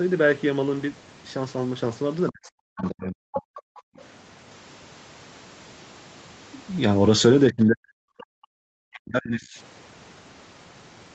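From 2.3 to 3.68 s the speech dips and breaks up in pieces, falling by about 40 dB at its deepest. This is speech suppressed in double talk, likely from the echo canceller turning down the near talker while the far side was also speaking. The same drops return from 7.49 to 7.95 s and from 8.57 to 9.59 s.

Inside and just after the first drop, the other side's voice leaks through as short scraps at 2.78 to 2.89 s, 3.33 to 3.41 s and 3.59 to 3.8 s. They sit well below the main speech, loudest at the middle scrap. A further scrap comes at 8.2 s. The likely cause is loudspeaker echo that the canceller did not fully remove.

Right after that scrap, at 8.24 s, the background is gated by the echo canceller: the room sound drops out by about 40 dB for roughly 50 ms, then returns. Throughout the clip, the call path's band limit leaves nothing above 8 kHz.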